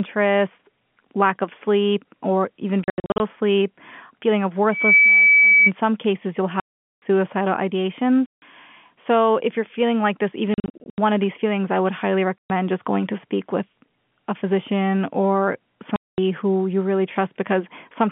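Speech over a telephone-band line has its words chopped by hard-edged silent gaps at 2.84 to 3.20 s, 6.60 to 7.02 s (just after "some cases you'll"), 8.26 to 8.42 s, 10.54 to 10.98 s (between "you're feeling like this" and "of these feelings I"), 12.38 to 12.50 s and 15.96 to 16.18 s. These gaps are packet loss filled with silence, and their lengths fit 20 ms packets. Between "sleep feeling of" and "some cases you'll", from 4.72 to 5.71 s, a 2.3 kHz tone swells over about a third of a second to well above the speech. This is a loudspeaker feedback squeal, where the loop gain at that frequency exceeds one.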